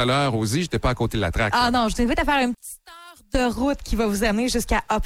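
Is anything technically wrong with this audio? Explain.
Yes. From 2.55 to 3.35 s, one channel inverted is the likely cause: reversed polarity cancels shared content when summed, dropping the sound about 20 dB to a faint remnant.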